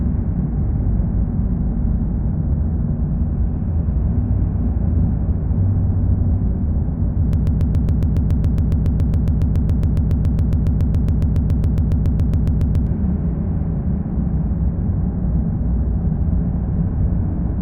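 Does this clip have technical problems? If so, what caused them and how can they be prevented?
Yes. A broken-record loop runs from 7.33 to 12.87 s, where a 139 ms fragment of the sound repeats back to back about 40 times. The likely cause is a stalled player or stream resending its last buffered piece, so the intended audio is lost. Adequate buffering and stall detection that mutes rather than repeats would prevent it.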